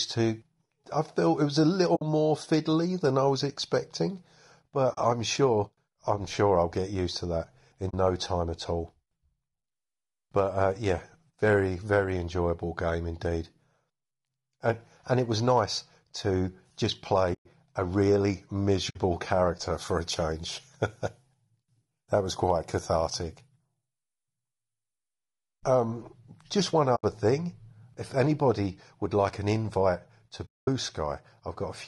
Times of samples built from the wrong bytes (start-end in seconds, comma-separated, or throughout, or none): none